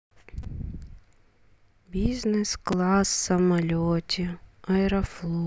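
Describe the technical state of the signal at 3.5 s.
The speech at 3.5 s plays through intact, with no dropout, distortion, glitch or other fault audible at that moment.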